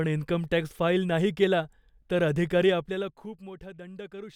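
From 2.60 to 3.52 s, right after "फाईल नाही केला तर", a fast ticking rides on the speech as its level falls by roughly 20 dB. This is zipper noise. The gain drops in unsmoothed 2 dB jumps, around fifteen a second, instead of gliding. Each abrupt step puts a small discontinuity in the waveform, and together those clicks form the zipping texture heard while the level is moving.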